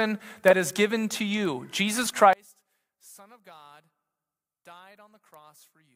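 From 2.33 s to the end, the speech drops by about 30 dB to a faint residue, likely because one channel inverted and cancels the centred voice when the channels are summed. The waveform collapses abruptly, and the spectrogram's low-frequency energy nearly disappears.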